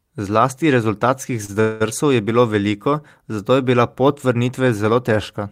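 At 1.45 s a short stall from a late packet holds the sound for 30 ms, a brief stretched sound with a slight buzz or dip; the speech resumes without loss. From 1.60 to 1.82 s a call audio freeze follows: the sound is continued as a fading buzz or hiss for 200 ms, likely from packets delayed and an emptied jitter buffer, then resumes where it stopped with nothing missing.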